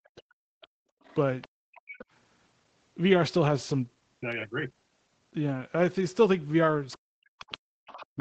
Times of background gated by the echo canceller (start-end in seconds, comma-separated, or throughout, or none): 0.81-1.92